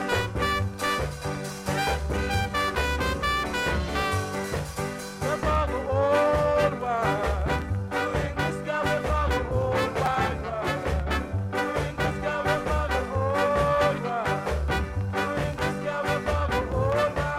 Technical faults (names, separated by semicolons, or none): chunks out of order